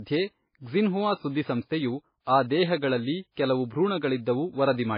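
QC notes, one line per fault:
Throughout: transcoding between lossy codecs. The speech is dull and boxed in, with nothing above 5 kHz, and two kinds of damage are heard together. The likely cause is a very low-bitrate MP3 encode, near 17 kbit/s by the sound, re-encoded as WMA. The second codec spent bits reproducing the first one's artefacts and added its own, while the early band limit stayed.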